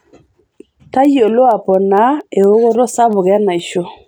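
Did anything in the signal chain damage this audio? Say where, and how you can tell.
Yes. The damage sits at the digital interface between two devices: word clock ticks run through the speech from 0.12 s to 4.06 s, about twenty sharp clicks roughly every 0.2 s, uneven in strength. The receiver's clock drifts against the sender's by something on the order of 100 ppm, so one sample slips at each crossing. A spectrogram shows thin full-height vertical lines at that steady spacing; the waveform shows a single-sample step at each.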